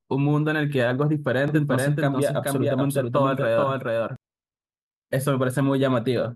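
From 1.48 to 4.16 s the speech has a doubled audio track. A second full-band copy trails about 0.4 s behind, at roughly the same level. It has no decay or room tone. It appears and vanishes abruptly. A slower second capture path is the likely cause.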